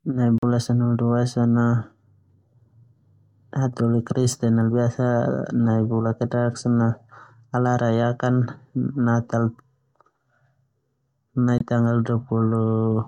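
At 0.38 s the speech cuts to silence until 0.44 s, just before "sanahulu dua". The gap is about 50 ms. A second, shorter gap of about 40 ms runs from 11.58 s to 11.62 s. Both are likely a Bluetooth dropout. Packets arrived too late and were discarded, so the output went silent. Speech then resumes further along, as if it kept playing. The gap sizes fit one or two lost frames of about 21 ms each.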